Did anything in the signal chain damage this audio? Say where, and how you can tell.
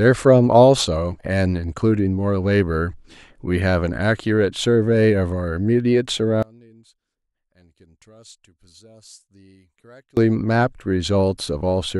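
Yes. From 6.43 s to 10.17 s the speech collapses by about 30 dB into a faint residue, then returns at full strength. This is one channel inverted, with the cause likely a reversed-polarity connection in the analogue wiring: identical content in both channels cancels when summed to mono, taking the centred speech and its low end with it. A simple level drop or dropout would keep the full tone or leave silence, not this faint remnant.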